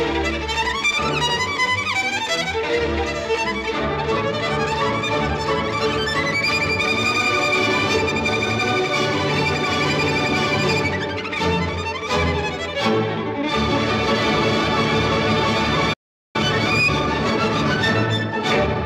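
A playback stall runs from 15.93 to 16.36 s: the audio cuts off in mid-flow and the output stays silent for about 0.41 s before sound returns. The likely cause is that the player either exhausted its buffered data or had its playback thread held up, so nothing reached the output until it recovered. The gap is long enough to register as a clear dropout rather than a click.

Time-compressed catch-up follows directly, from 16.36 to 18.76 s, with the audio running at 1.15 times normal speed while its pitch stays where it was. Having fallen behind during the silence, the player trims its backlog by removing short slices of audio and cross-fading across the joins, which makes these 2.4 seconds sound hurried without raising the pitch.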